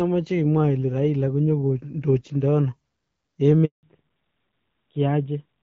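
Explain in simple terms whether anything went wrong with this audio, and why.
At 3.65 s the sound cuts out completely for about 0.18 s, a handover gap: the call switched networks and nothing arrived, unlike a brief dropout that would clip only a sliver. From 3.83 s to the end, a fallback to narrowband strips everything above 4 kHz, so the sound turns duller and stays that way instead of recovering.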